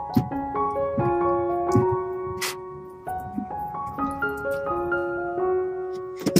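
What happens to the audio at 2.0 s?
Nothing goes wrong at 2.0 s: the audio there plays through intact, with no dropout, click, distortion or other fault to be heard.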